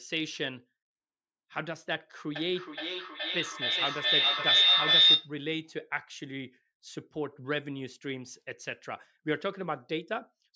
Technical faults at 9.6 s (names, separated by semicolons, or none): none